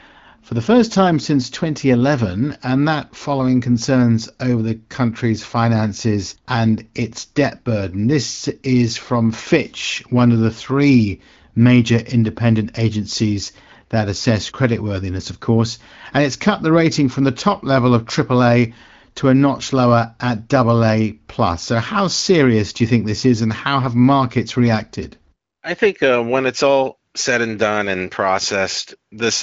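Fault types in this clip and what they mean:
Nothing here counts as a fault: the speech comes through the AMR wideband (HD Voice) codec at 15.85 kbit/s, with light coding damage and nothing above about 7.5 kHz.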